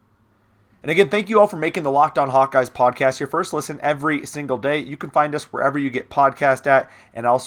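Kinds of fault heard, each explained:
No technical faults can be heard in this speech clip. The Opus voice compression keeps the full audio band with only light coding traces, which fits hybrid coding at around 24 kbps.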